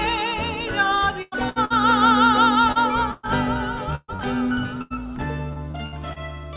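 From 1.22 to 6.19 s, repeated packet loss opens a dozen gaps, the longest 128 ms, each patched by extending earlier sound. The narrowband audio, with nothing above 4 kHz, turns choppy and robotic.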